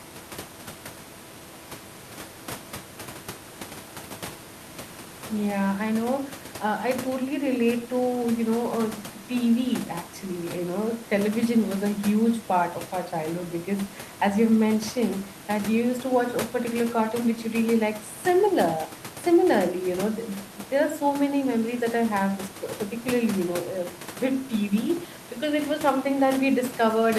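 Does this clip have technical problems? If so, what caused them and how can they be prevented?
No, there are no technical faults in this speech; the only thing beneath it is the room's own background noise, about 18 dB below the speech, which belongs to the recording space rather than the system.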